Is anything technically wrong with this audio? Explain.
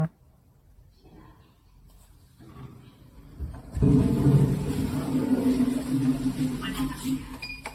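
Yes. Throughout the clip there is generation loss: the audio was likely decoded and re-encoded around seven times through a lossy codec, which sounds like AAC-LC at about 64 kbit/s. Each pass adds fresh quantisation noise on a shifted frame grid, leaving a swirly, hollow, smeared texture with blurred attacks, and nothing above 16.6 kHz.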